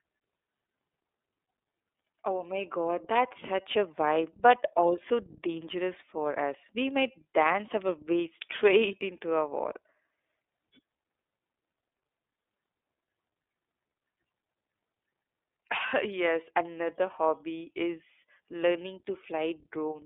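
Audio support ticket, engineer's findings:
iLBC codec, whole clip: narrowband, nothing below about 300 Hz or above 3.6 kHz. Speech clearly rough and synthetic, consistent with 30 ms frames coded independently, fitting the 13.33 kbps mode. Probable component: VoIP transcoding stage.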